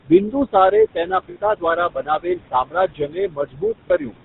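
Speech runs through a GSM full-rate codec for the whole clip. The voice has the buzzy, gravelly edge of a coder that rebuilds the vocal tract from sparse pulses. Nothing remains above 4 kHz, and the damage is plainly audible. The sound fits a 13 kbps GSM full-rate stream. Noise suppressor artifacts are also present throughout. The room noise sits about 12 dB below the speech, and the suppressor pulls it down by about 21 dB between phrases. The residue swells under the voice. The suppressor also cuts speech. From 0.3 to 0.55 s, roughly a tenth of a second of speech drops by up to about 15 dB. From 0.94 to 4.17 s, about one and a half seconds in total are swallowed, falling by as much as about 21 dB, so soft sounds and endings go faint. Lost GSM frames cause two brief breaks. From 1.30 to 1.37 s, a 60 ms gap becomes a rough metallic hold as the last good frame repeats. That gap fits three lost frames. 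From 3.88 to 3.91 s, a shorter 20 ms loss gives a similar quick ring, consistent with one frame.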